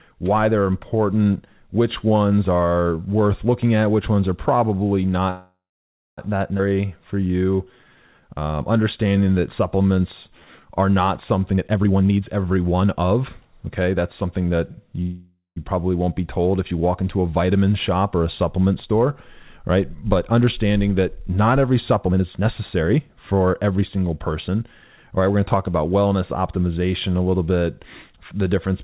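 At 5.3 s the speech halts in a call audio freeze lasting until 6.19 s. The last sound carries on as a fading buzz, then about 0.6 s of silence. Packets were likely held up and the jitter buffer ran dry. Speech resumes where it stopped, with nothing lost.

At 6.57 s comes a skip ahead. Roughly half a second of speech is dropped. The two sides join almost directly, with only a tiny fill of 14 ms. It sounds like an abrupt jump forward.

From 6.69 s to 10.62 s a jitter buffer slow-down follows. The receiver repeats single pitch periods to rebuild its reserve, adding about 0.5 s in total. Speech runs at 87% speed. Pitch stays the same. Sounds are drawn out.

After "are not", from 11.53 s to 14.56 s, a jitter buffer speed-up sets in. The buffer holds too much, so short pitch-period pieces are cut, about a second overall. Speech runs at 128% speed and sounds hurried, with unchanged pitch.

A second call audio freeze runs from 15.02 s to 15.58 s, just before "probably won't be told". 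The held sound fades, leaving about 0.15 s of silence. Again it is likely delayed packets. Speech continues intact afterwards.

After "understanding that not every", from 22.08 s to 25.55 s, another jitter buffer speed-up brings speech to 115% speed until "about wellness optimization a". About half a second is trimmed. It is milder than the first but still rushed.

Throughout, the call path passes nothing above 4 kHz. That fits narrowband G.711 A-law coding.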